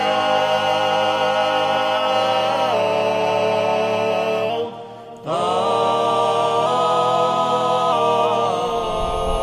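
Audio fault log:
2.73–4.50 s, drift correction step: likely clock-matching software slowing playback 6.31% to refill its buffer; sound drops 113 cents, about a semitone flat, then snaps back.
6.66–7.92 s, drift correction step: likely the same correction speeding playback 6.31% to drain its buffer; sound rises 106 cents, roughly a semitone sharp, before returning.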